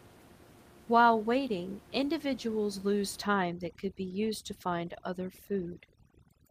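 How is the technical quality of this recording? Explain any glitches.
The recording has one glitch, starting at 3.22 s, just after "waiting individuals lose", and lasting to the end. Overdone noise removal cuts frequency bands near its noise estimate too hard, so the room noise, about 23 dB below the speech, drops to twinkling near-silence, and quiet parts of the voice go with it.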